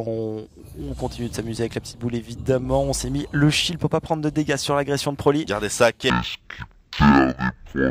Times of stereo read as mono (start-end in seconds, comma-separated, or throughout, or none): 6.10-7.90